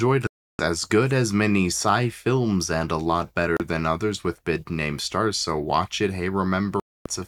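It's a speech clip with three digital broadcast dropouts, where the receiver lost good frames and muted: about 0.32 s of silence from 0.27 to 0.60 s before "as good as many", a brief gap at 3.57–3.60 s between "films and a lot" and "than others with big", and another from 6.80 to 7.06 s. The missing audio is gone.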